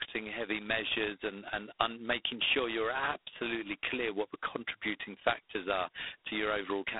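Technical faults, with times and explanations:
Throughout, G.726 ADPCM: speech is confined to about 300 Hz to 3.7 kHz, with nothing above 3.8 kHz, and carries a heavy, rasping hiss that tracks its level. Each sample stores only a coarse difference from an adaptive prediction, which fits the 16 kbit/s mode.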